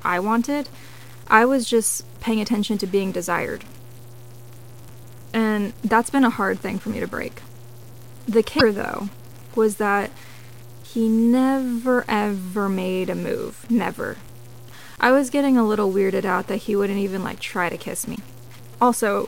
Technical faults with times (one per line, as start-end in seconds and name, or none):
0.00-19.28 low bit depth without dither
8.56-8.61 damaged data in a compressed stream
18.12-18.19 damaged data in a compressed stream